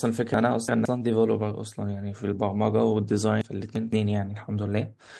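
From 0.34 to 0.85 s the speech jumbles. These are chunks out of order. One chunk of about 171 ms played two chunks late, after the ones meant to follow it. Nothing is missing. There are three hard joins, and that stretch sounds garbled.

At 0.95 to 0.97 s, one 20 ms packet was lost. It was rebuilt from error correction, using a low-bitrate copy carried in the next packet. There is no gap. That brief frame sounds rougher and noisier.

From 3.41 to 3.93 s the same out-of-order fault returns. Again a chunk of about 171 ms plays two chunks late. Three hard joins scramble that moment.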